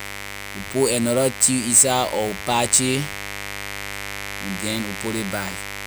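A steady, raspy buzz runs under the speech from start to finish, sitting only around ten decibels below it, so it stays prominent even through pauses. This is mains buzz on a 50 Hz supply: sharp switching spikes, twice per mains cycle, leak into the signal path, perhaps from a dimmer, a rectifier or poor shielding. Because the spikes are so abrupt, they carry a dense stack of 50 Hz harmonics extending up to several kHz, which gives the buzz its edge rather than a smooth hum.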